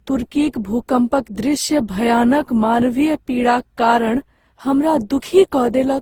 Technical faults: generation loss

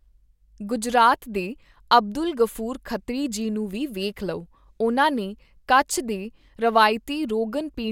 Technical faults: none

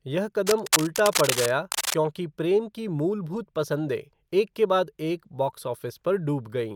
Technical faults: cable scratch noise

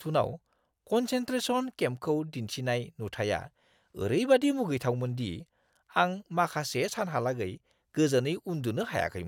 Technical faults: none

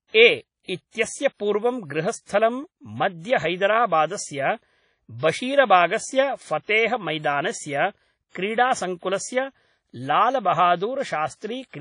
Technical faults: WMA compression

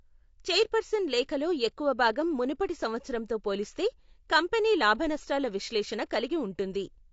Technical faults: low-delay AAC compression

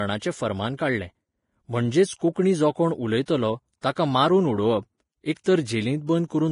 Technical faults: Vorbis compression; pre-echo

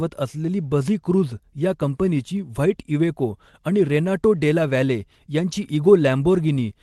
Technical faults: none

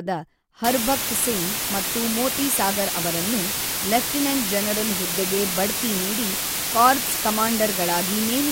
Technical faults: low bit depth with dither

